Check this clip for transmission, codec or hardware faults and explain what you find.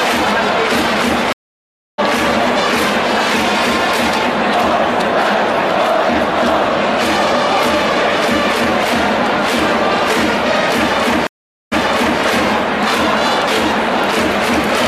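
There are two stream reconnects. The first runs from 1.33 to 2.00 s and the second from 11.27 to 12.20 s. Each time the connection drops, the player goes quiet, then reconnects and spins up a fresh decoder partway through the stream, so the first frame or two come back muted or faded in. After the first gap of about 0.66 s of silence, the sound picks up roughly half a second further on, so a chunk is simply skipped. After the second gap of 0.45 s, it resumes 0.49 s earlier, which points to the server resending a burst, so you hear a short stretch repeated.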